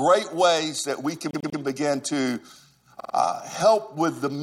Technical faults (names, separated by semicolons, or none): repeated frames